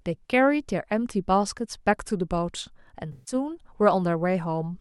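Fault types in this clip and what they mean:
AAC frame loss with concealment: From 3.12 to 3.34 s, about 0.15 s of coded speech is missing. The decoder rebuilds it from the last good spectrum, with scrambled signs or interpolated energy. The patch sounds smeared and noisy, which fits a short run of lost frames.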